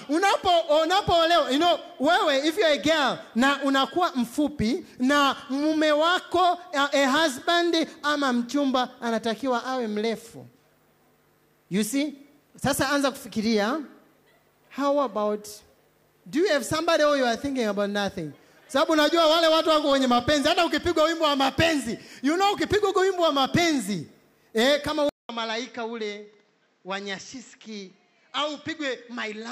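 At 25.09 s the sound cuts out for 200 ms. When it returns, it is duller and boxier, and stays that way to the end at 29.52 s. Nothing above 7.8 kHz comes through. The level drops by around 5 dB. A new, faint background noise sits roughly 40 dB under the signal. The likely cause is the input switched to a poorer device partway through, one with a narrower band and its own noise.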